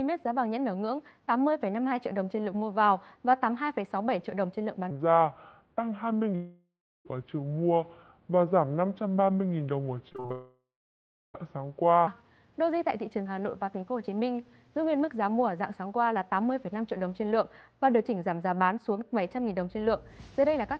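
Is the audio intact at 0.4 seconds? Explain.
Yes, the audio at 0.4 seconds is intact, with nothing audible there beyond the ordinary character of the call path it passed through.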